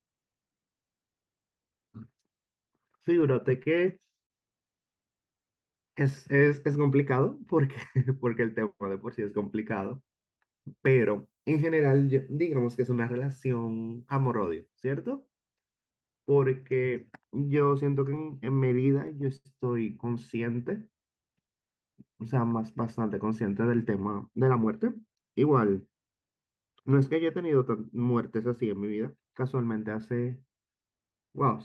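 From 3.21 to 4.32 s there are scattered short gaps. About four small holes in the packet stream were patched by carrying the last sound forward. Together they cover around 70 ms, and the longest is roughly 40 ms. Little sound is lost. The speech stays clear but picks up brief ticks and tiny smears.

At 5.30 to 6.12 s comes a jitter buffer slow-down. The buffer ran short, so the receiver repeated single pitch periods to build a reserve. This adds 76 ms, and playback runs at 92% speed. Pitch stays the same. Sounds stretch out. The same thing happens again at 20.53 to 21.11 s, adding 55 ms at 92% speed.

At 8.25 to 8.94 s there is a jitter buffer speed-up. Too much audio had piled up, so the receiver trimmed short pitch-period pieces to cut the delay. About 50 ms is removed, and the speech runs at 107% speed. It sounds slightly hurried, with the pitch unchanged. A longer speed-up follows at 23.04 to 24.73 s. 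It plays at 110% and drops roughly 150 ms, so the rush is more noticeable.

From 10.86 to 14.69 s, pre-emphasis was left on. The treble boost applied for transmission was never undone. At 10 kHz the level sits about 11 dB above 1 kHz, a tilt that fits the standard 50 µs FM curve. The voice turns thin and bright, and sibilants hiss sharply.

At 18.16 to 19.47 s there are repeated stalls, heard as stutter. Packets kept arriving late, so the buffer emptied nine times. Each time the receiver held the last sound, fading it during longer waits. The gaps total 169 ms, about 13% of the stretch. The longest is 88 ms. Nothing is missing, but the speech drags and stammers.

Throughout, the Opus call path leaves its normal coding texture, with no content above about 12 kHz.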